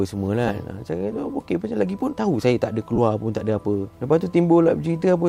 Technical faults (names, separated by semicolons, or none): lost LE Audio frames